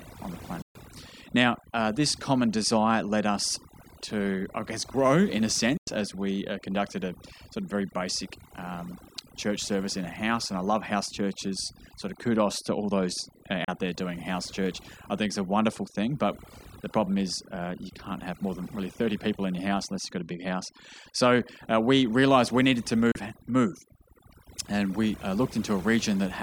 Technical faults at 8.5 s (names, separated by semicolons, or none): overdone noise removal